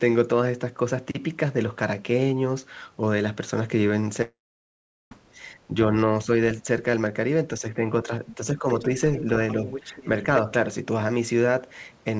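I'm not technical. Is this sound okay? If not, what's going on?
No, there are a few problems worth knowing about.

Around 4.22 to 5.13 seconds there's a long network dropout. Nearly a second of the talker never arrived, likely because the connection stalled. You hear the last sound smear into a fading buzz, then mostly silence, and the speech picks up again with that bit missing.

Next comes speech suppressed in double talk, at 5.67 to 5.76, 7.60 to 8.65, and 8.82 to 8.90 seconds. The talker's voice dips and sounds duller. The first dip is the most noticeable, and the later two are milder. The likely cause is both people talking at once, so the echo canceller turned everyone down.

Finally, there's the other side's voice leaking through, at 9.16 to 9.23 and 9.51 to 10.07 seconds. A faint second voice sneaks in underneath, a quick scrap first and then a longer, slightly stronger stretch. 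This is likely sound from the loudspeaker that the echo cancelling didn't fully remove from the microphone.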